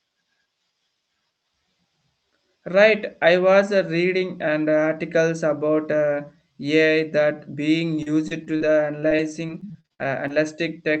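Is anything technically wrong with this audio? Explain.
Yes. From 7.91 s to 10.36 s the speech suffers repeated packet loss, producing a robotic sound. More than a dozen short holes, the longest about 50 ms, each get patched by extending the preceding audio, and about 15% of the stretch ends up concealed, roughly half a second in total. Because the losses recur so closely, the speech turns choppy and robotic, with fragments missing. The call codec's bandwidth limit, with content stopping near 8 kHz, is consistent with Opus.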